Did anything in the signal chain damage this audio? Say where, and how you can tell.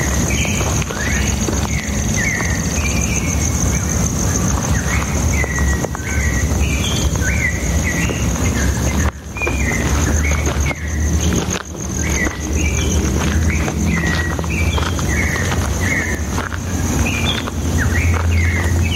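Yes. All the way through there's gain pumping: the gain swings by around 10 dB with the loud moments, so loud and quiet parts sit squashed together. The likely cause is input gain set way too hot, with a fast limiter or compressor in the processing stage clamping it down.

There are also two bit error spikes, sharp broadband ticks at 8.49 s and 16.15 s that have nothing to do with the surrounding sound. A flipped bit in storage or on a digital link knocks a sample value off by a power of two, and it snaps straight back. The first tick fits three samples in a row, the second a single one.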